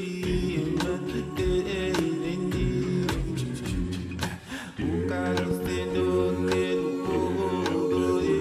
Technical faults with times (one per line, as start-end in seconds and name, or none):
1.99-2.01 loud pop
5.51-5.68 loud pop